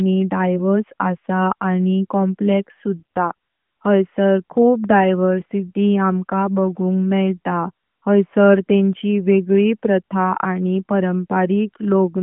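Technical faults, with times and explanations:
No technical faults are present in this speech clip. The sound carries the narrow telephone character of the AMR narrowband mobile codec working as intended, with the line band running from about 150 Hz to 3.4 kHz, nothing above 3.6 kHz, and only light codec colouring at 12.2 kbps.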